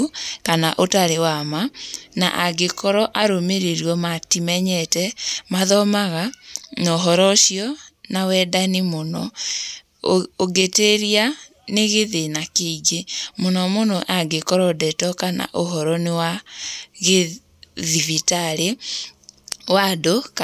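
No technical faults are audible.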